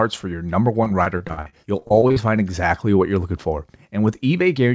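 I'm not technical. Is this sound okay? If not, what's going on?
No. Between 0.84 and 2.18 s, repeated packet loss (robotic sound) occurs. Pieces of the signal kept dropping out and were filled by stretching earlier sound, so it turns choppy with pieces missing.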